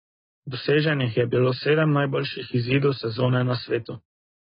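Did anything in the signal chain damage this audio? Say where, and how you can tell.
Yes, at the codec stage, and it runs through the whole speech clip. There is nothing above 5 kHz, so a spectrogram shows a hard ceiling with empty space above it. Below that ceiling the bands break into holes or patches of substitute noise. The heavy smearing and warbly, fizzy sibilants point to AAC compression, likely AAC-LC at a starved bitrate around 16 kbps, quantising each frame's spectrum too coarsely.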